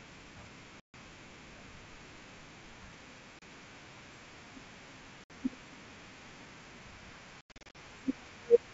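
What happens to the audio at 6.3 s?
Nothing goes wrong at 6.3 s: the speech carries on intact through that moment, with the G.722 wideband coding at 64 kbit/s running as it does throughout.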